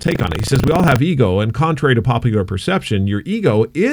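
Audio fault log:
0.0–0.99 s, buffer tearing: a robotic 25 Hz rattle rides on the speech until just before "ego and contrary to". Writer and hardware reader have slipped, so a small slice of each 40 ms period replays audio from roughly 70 ms earlier, with hard joins.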